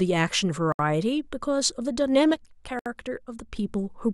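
Separately encoded pieces of this speech recording were joined without trimming the encoder's start-up delay and final-frame padding, so a gap at a join of encoded pieces opens twice: a silence of about 68 ms from 0.72 to 0.79 s, and another of about 67 ms from 2.79 to 2.86 s, 2 s apart. Each dropout cuts into continuous speech with smeared edges, and the sound resumes from where it broke off. A digital gain setting was likely applied without a ramp, producing a sudden gain jump: at 2.34 s the speech and its background noise drop together by about 4 dB in a single step, stay at that lower level, and at 3.57 s snap back up just as abruptly, overlapping the second gap.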